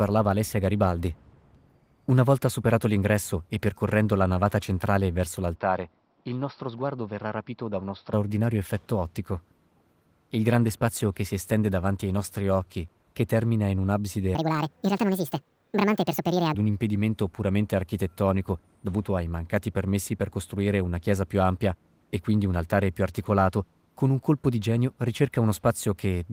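From 5.55 to 8.13 s, right after "la navata centrale verso", the speech turns dull and boxy. It drops about 5 dB and gains a faint new noise floor, then clears at "effetto ottico". The likely cause is an input switched to a poorer device mid-recording.

From 14.35 to 16.54 s, after "occhi che termina in", the speech turns high and hurried, pitched up by roughly ten semitones, until "un impedimento puramente". This section is played at the wrong speed, 1.66 times too fast, likely from being fitted to the wrong clock.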